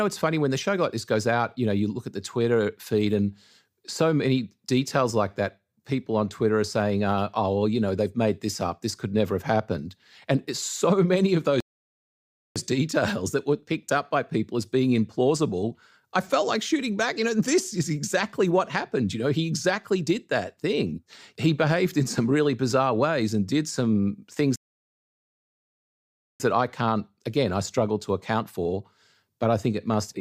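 At 11.60 s the player's buffer empties and playback halts in a rebuffering stall: the speech drops to silence for about 0.95 s, then picks up at exactly the point where it broke off, ending the gap at 12.56 s. The same stall returns at 24.56 s and lasts longer, about 1.84 s, until 26.40 s. No audio is skipped either time; the pauses simply stretch the timeline.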